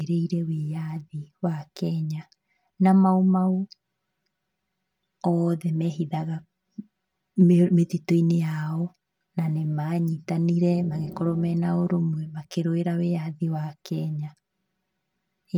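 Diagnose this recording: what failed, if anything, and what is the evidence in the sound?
Channel delay (comb filtering) across the whole speech clip: one side arrives around 5 ms late before the mono sum, carving hollow, phasey notches from around 100 Hz upward.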